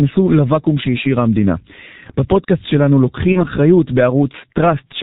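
Muffled, hoarse speech runs through the whole clip, with consonants smeared and nothing audible above 4 kHz. This is heavy G.723.1 codec damage. The dull, rough character fits a bitrate of about 6.3 kbit/s, where coarse 30 ms frames and a slowly adapting voice model blur rapid changes.

From 3.33 to 3.45 s the voice turns briefly buzzy or noisy and weak, then recovers gradually. This is VoIP packet loss concealed by the speech codec. The decoder filled a gap that fits one lost 30 ms frame by repeating its last pitch and filter at falling gain, and the distortion lingers because later frames build on that guess.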